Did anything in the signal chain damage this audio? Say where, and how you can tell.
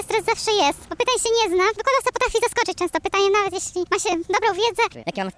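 Yes, at the playback stage there is a wrong sample rate. The samples are clocked out faster than they were captured, with no rate conversion, so the whole clip runs about 1.38 times too fast and sits about 5.5 semitones sharp from start to finish. Speed and pitch rise together by the same ratio, which fits 16 kHz material being played back at 22 kHz.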